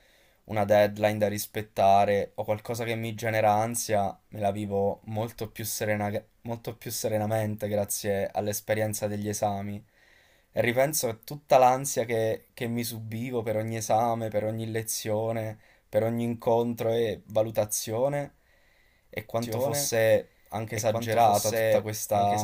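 At 19.42 s a doubled audio track begins and runs to the end: a second, full-band copy of the speech enters abruptly, about as loud as the original and roughly a second and a half behind it. This is likely a second capture through a slower path, or an edit holding two out-of-step copies. Unlike an echo or reverb, the copy has no decay, no room colouring and no repeats fading away.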